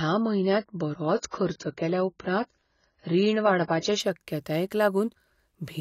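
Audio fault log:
0.0–4.0 s, adaptive stream starting at a low bitrate: the player began on a low-quality stream version, then switched up at 4.0 s. Until then nothing sounds above 7 kHz and codec artefacts are heavier, which fits a low AAC bitrate. Quality improves suddenly, with no gap.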